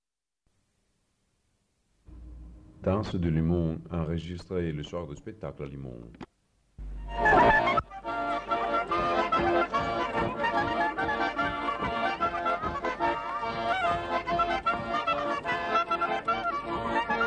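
Nothing technically wrong turns up anywhere in this audio, so there's no fault to point to and no time or cause to give.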